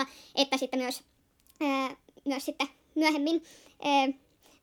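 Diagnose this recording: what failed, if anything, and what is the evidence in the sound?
Playback stage: a wrong sample rate runs from start to end. The speech is hurried and high, about 1.38 times normal speed and roughly 5.5 semitones up, which fits audio captured at 32 kHz being clocked out at 44.1 kHz with no conversion. Speed and pitch move together by the same ratio, and the vocal formants rise with them. A pitch-shifter would keep the timing, and a time-stretch would keep the pitch.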